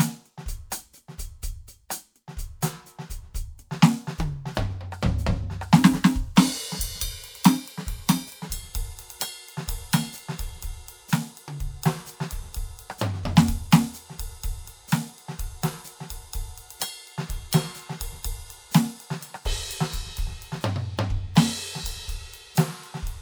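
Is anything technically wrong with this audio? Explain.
Yes. From 5.79 to 8.47 s the music plays as a section at the wrong speed: 1.12 times too fast and about two semitones sharp, likely from being fitted to the wrong clock. On a spectrogram the harmonics step up at 5.79 s and drop back at 8.47 s, and the waveform's attacks crowd closer together.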